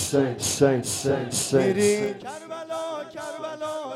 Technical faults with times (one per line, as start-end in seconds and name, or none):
1.95-2.28 zipper noise